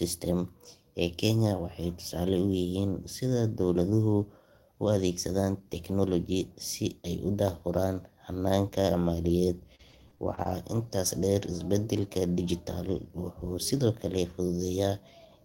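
From 9.75 to 10.51 s, repeated packet loss hit the stream: about six short dropouts, the longest 38 ms, each patched by stretching the preceding sound, concealing roughly a fifth of the span. Speech turns choppy, with pieces missing, just before "intaas dheer isbeddelka".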